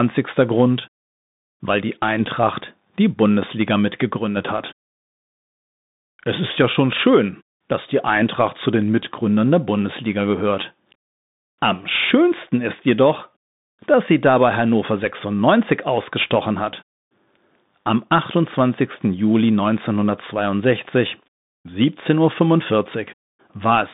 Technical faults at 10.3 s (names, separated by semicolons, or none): Bluetooth CVSD headset codec